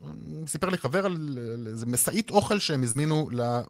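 At about 2.91 to 2.97 s the speech smears for an instant, with a brief wobble where the sound should move cleanly onward, and any short consonant there can drop out. This is short concealed packet loss: roughly 40 ms of the stream arrived too late to decode, and the receiver papered over about 36 ms of it by extending the preceding sound, pitched if voiced, noise-like if not, before crossfading back into the real signal.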